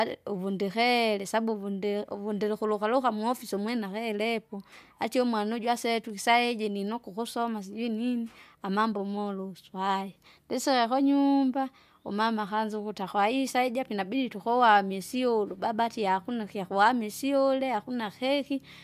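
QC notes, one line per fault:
Nothing to log on this speech recording; no faults turned up anywhere in it.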